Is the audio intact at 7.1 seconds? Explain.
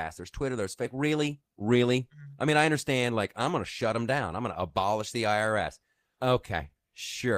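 Yes, at 7.1 seconds the audio is intact, with no dropout, click, distortion or other fault at that moment.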